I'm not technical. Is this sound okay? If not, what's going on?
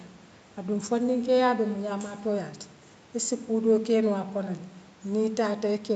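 Yes, there's nothing wrong to hear in this speech.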